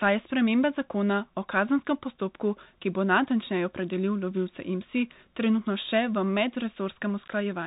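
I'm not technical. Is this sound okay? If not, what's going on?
No. The Bluetooth CVSD headset codec runs throughout, squeezing the speech into a crude phone-call format that drops everything above 3.8 kHz, leaving it dull and audibly damaged.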